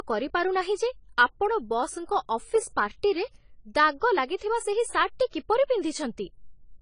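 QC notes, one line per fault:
Throughout: AAC compression. The speech sounds dull and smeared, with nothing above 10 kHz and plainly audible warbling, fizzy artefacts on sibilants, likely from AAC-LC at a low bitrate, around 24 kbps. A plain low-pass filter would dull without this swirling texture.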